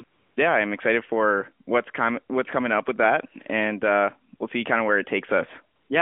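A speech clip over a narrowband phone line whose real background drops out twice, replaced by a steady, smooth hiss from 0.04 to 0.36 s, just before "yeah I'm excited for", and from 5.76 to 5.90 s. This is AMR comfort noise: the sender judged those gaps silent and stopped sending speech frames, and the receiver filled them with synthetic noise.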